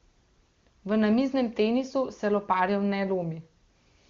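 A speech recording with no technical faults to point out. The wide, clear band of sound fits an AMR wideband (HD Voice) codec at a high rate such as 23.85 kbit/s, and any effect of the coding is faint at most.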